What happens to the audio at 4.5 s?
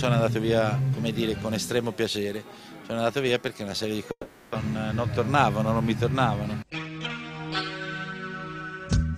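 At 4.5 s a long network dropout runs from 4.11 to 4.56 s, likely from audio packets never arriving. The last sound stretches into a fading buzz, then falls to about 50 ms of silence, and about 0.4 s of audio is skipped. A spectrogram shows a smeared, decaying band and then a blank gap.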